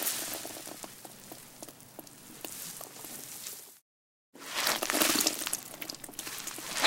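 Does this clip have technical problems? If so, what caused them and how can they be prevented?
No, nothing technical gets in the way here, so there's no cause to chase down and nothing that needs preventing.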